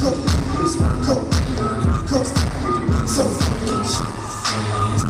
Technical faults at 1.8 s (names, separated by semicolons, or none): none